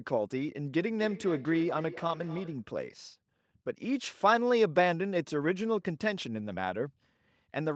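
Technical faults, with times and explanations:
0.9–2.67 s, feedback echo between two devices: a second device replays this microphone's signal into the room, and the microphone recaptures it beyond its own echo canceller's reach. The speech returns roughly every third of a second, thin and ringing, peaking about 17 dB below it.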